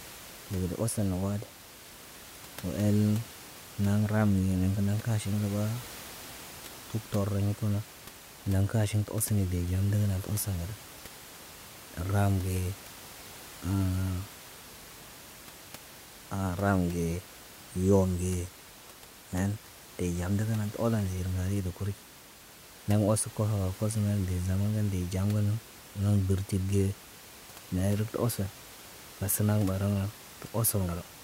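No technical faults can be heard in this speech recording. A room noise sits in the background about 19 dB below the speech, and it belongs to the space where the microphone was, not to the system.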